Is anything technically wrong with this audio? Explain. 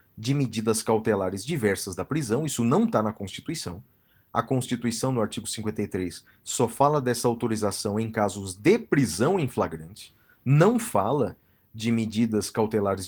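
No, nothing is technically wrong with this speech recording. It shows no sign of trouble in how it was captured, processed or played back.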